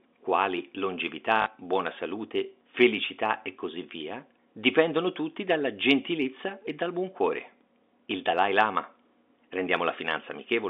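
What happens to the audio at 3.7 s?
Nothing goes wrong at 3.7 s: the speech passes through intact, carried in the narrow telephone band of G.711 coding, with no dropout, click or distortion at that moment.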